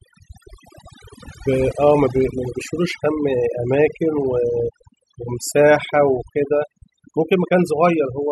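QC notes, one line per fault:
Throughout: overdone noise removal. The noise reduction on this speech was pushed much too hard. Any frequency band sitting close to what the processor took for the noise floor got clamped down or shut off entirely, so the background noise drops away but leaves little twinkling specks behind. The quieter parts of the speech got caught in the same net.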